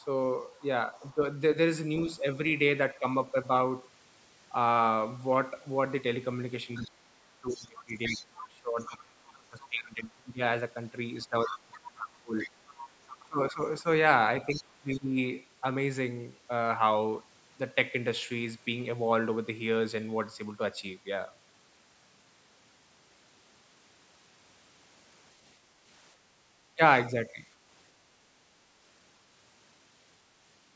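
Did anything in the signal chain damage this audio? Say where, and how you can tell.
Yes, the damage is in the call processing stage, specifically the echo canceller.

Other side's voice leaking through: a second voice sits under the talker from 0.00 to 1.14 s, very faint at about 35 dB down, then much plainer at about 15 dB down from 6.74 to 9.80 s, 11.20 to 13.28 s, and in a brief scrap at 14.54 to 14.63 s. The likely cause is a loudspeaker on the talker's device feeding the far end into the microphone, with the canceller failing to subtract all of that echo.

Speech suppressed in double talk: the talker's level sags in three stretches. From 1.00 to 3.35 s it dips slightly, by about 5 dB over roughly a third of a second. From 6.77 to 15.18 s it drops by as much as about 25 dB across some five seconds in total. From 26.75 to 27.40 s there is a shorter dip of about 10 dB. With both sides active, the canceller likely could not tell its own talker from the echo and attenuated everything.

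Background gated by the echo canceller: from 26.18 to 26.47 s the room sound itself ducks by about 6 dB for roughly 300 ms and then returns. That is the suppressor clamping the microphone while the loudspeaker was playing, then releasing it. The missing low bass and the absence of content above 8 kHz are ordinary call microphone filtering, not damage.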